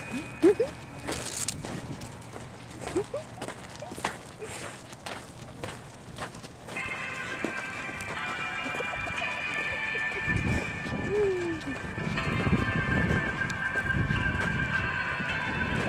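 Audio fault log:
8.73–9.67 s and 11.13–11.95 s, jitter buffer speed-up: the receiver had built up more audio than its target and trimmed it by cutting out short runs of whole pitch periods, about 27% faster in the first stretch (roughly a third of a second removed) and 7% faster in the second (a few tens of milliseconds). The pitch stays put but the sound runs hurried. On a spectrogram the harmonic spacing is unchanged while onsets crowd closer. The waveform shows a compressed envelope with small splice joins.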